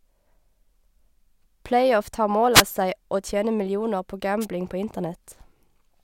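At 2.53 to 2.63 s, a wireless microphone noise hit cuts across the speech. It comes back at 4.40 to 4.46 s. Each is a brief swish of static. The radio signal faded as reflections cancelled, and receiver noise briefly rose.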